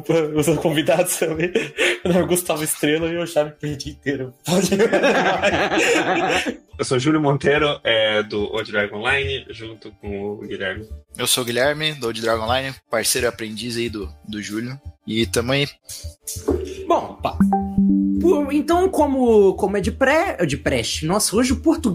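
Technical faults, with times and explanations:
No technical faults can be heard, so there are no times or explanations to give.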